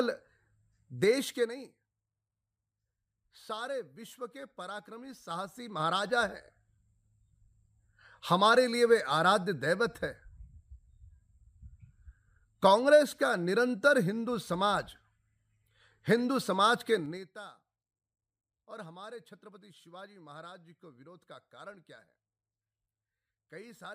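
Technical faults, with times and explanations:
0.94–1.92 s, 5.18–6.36 s and 16.92–17.32 s, zipper noise: the level drops, climbs, then drops fast in jumps of about 3 dB with no smoothing, so each jump ticks audibly.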